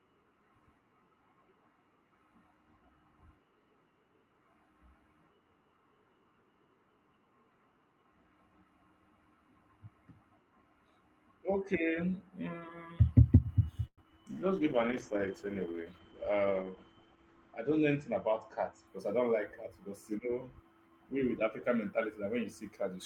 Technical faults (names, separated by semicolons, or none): call audio freeze; short concealed packet loss; jitter buffer slow-down; call bitrate drop; jitter buffer speed-up